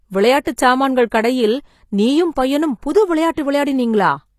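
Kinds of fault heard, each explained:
HE-AAC compression: The treble is rebuilt rather than kept, leaving gritty, lispy s sounds and nothing above 14.9 kHz. This likely comes from HE-AAC at a low bitrate.
Pre-echo: Codec noise spreads ahead of sharp attacks. A brief hiss of 15 to 34 ms precedes them, at 0.44, 0.56, 1.10 and 3.34 s.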